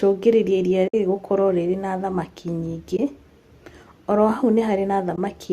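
At 0.88 s the speech drops out until 0.94 s, a gap of about 60 ms. This is AAC frame loss with muting. Whole frames failed to arrive, and the decoder zeroed their spectrum. The overlapping windows fade the sound out and back in, so the hole has soft edges. The length fits about six 10 ms frames. Shorter holes follow at 2.97–2.99 s and 5.16–5.18 s, about 20 ms each. The surrounding speech carries the light texture of a low-delay AAC codec, likely AAC-ELD.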